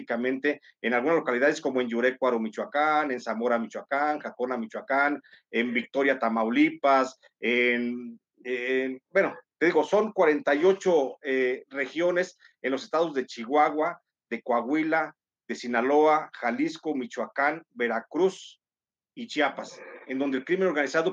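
No technical faults can be heard anywhere in the audio.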